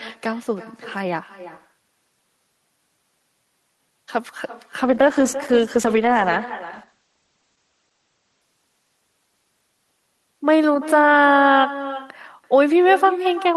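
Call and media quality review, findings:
Echo with no canceller, whole clip: speech trailed by a quieter, thinner copy about 14 dB down, roughly a third of a second late. Far-end loudspeaker feeding its microphone, nothing cancelling it, so the voice returns after the network round trip.

Call bitrate drop, 4.84 to 10.73 s: speech turns rough, watery and muffled, worst for about 2.8 s. Bandwidth narrows from 20 kHz to 8 kHz. This fits Opus falling from about 32 to 11 kbps after the bandwidth estimate collapsed.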